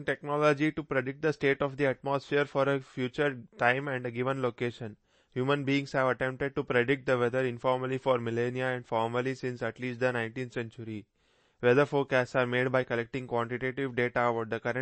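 Right from the start and all the way through, the speech carries plainly audible codec damage, most likely MP3 compression. Nothing comes through above about 8.3 kHz, so the top end sounds shut off. The encoder seems to have been short of bits, which fits a low bitrate around 32 kbps. It dropped the treble at a fixed point and let weak frequency lines flicker on and off between frames. That gives the speech a watery, swirly quality, with smeared attacks.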